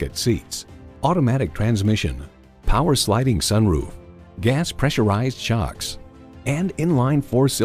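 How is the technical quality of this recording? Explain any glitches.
One fault stands out: CD scratch ticks from 0.77 to 2.1 s. Eight small ticks occur, about six per second, the longest lasting about two milliseconds. A disc blemish defeats error correction once per rotation. The player patches or mutes those samples, leaving regular clicks.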